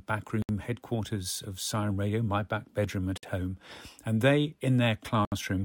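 Three gaps at joins of encoded pieces cut the speech. At 0.42 s, a 67 ms gap precedes "headquarters of". At 3.18 s, 55 ms splits "my back bedroom at" from "home and they". At 5.25 s, 69 ms. Each piece kept its encoder delay and end padding. Edges are smeared by the codec. Speech resumes where it stopped.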